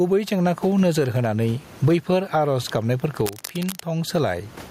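All the way through the speech there's gain pumping: the background swells in the pauses and ducks by around 20 dB under each loud syllable, likely a fast limiter fighting far too much mic gain. The room noise, sitting about 32 dB under the speech, is what you hear rising and falling. From 3.26 to 3.82 s there's a burst of cable scratch noise, a rough, uneven rustle only a little quieter than the speech, likely a worn cable or connector being moved.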